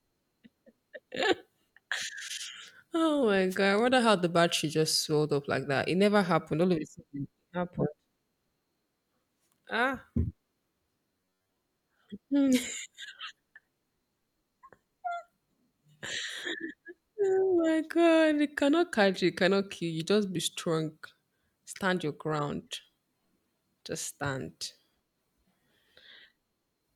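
From 3.49 to 3.57 s there is a wireless microphone noise hit. For about 80 ms the FM radio link fades as reflected signals cancel the direct one, and the receiver's own noise rises up through the speech as a brief swish of static. On a spectrogram it appears as a short vertical band of broadband hiss smearing across the formants. The waveform shows a burst of fuzzy, noise-like hash riding over the signal.

Between 11.12 and 11.56 s the speech turns into robotic sound from repeated short buffers, a stiff metallic buzz pitched at 93.8 Hz that loosely tracks the syllables. The cause is likely audio arriving too slowly, so the playback fills each gap by looping the last chunk while most of the real audio, roughly 70 percent, is skipped. A repeat period near 10.7 ms fits that pitch. A spectrogram shows rigid horizontal harmonics at multiples of 93.8 Hz. The waveform repeats the same short cycle again and again.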